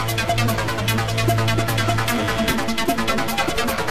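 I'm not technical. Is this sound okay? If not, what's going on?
No. From 1.92 s to 3.82 s there are GSM signalling bursts: a galloping dit-dit-dit of short buzzes, fairly quiet beneath the main sound. A 2G mobile phone close to the recording gear was exchanging brief radio messages with the network, as a phone does before a call or text arrives. The audio circuitry picked up those radio pulses and turned them into sound, giving a buzz at about 217 Hz, the rate the phone pulses.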